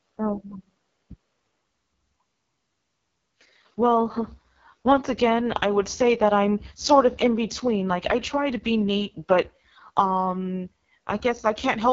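AMR wideband (HD Voice) codec damage runs throughout. Coding at 6.6 kbit/s, its lowest rate, leaves the speech rough and raspy, with nothing above about 7.1 kHz.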